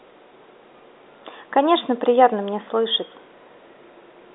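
Nothing is technically wrong with this speech recording, which simply carries the narrow telephone band with nothing above about 3.8 kHz.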